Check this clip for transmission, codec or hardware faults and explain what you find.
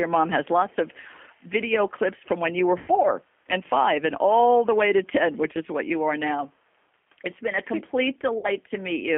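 The speech has two faults: a low-rate codec that runs through the whole clip, and two short packet-loss gaps that the decoder filled in.

G.729 codec, throughout: the sound is confined to roughly 250 Hz to 3.4 kHz and has a rough, synthetic edge, consistent with an 8 kbit/s G.729-style coder. Each frame is rebuilt from a vocal-tract filter, a pitch predictor and sparse pulses. The synthetic grain separates it from plain band-limiting.

VoIP packet loss concealed by the speech codec, from 2.78 to 2.91 s and from 8.38 to 8.49 s: the gaps are about 100 ms and 60 ms long, which fits five and three lost 20 ms packets. At each gap the decoder stretched its last pitch and filter into a fading buzzy tone or coloured noise, and the voice stays weak briefly afterwards.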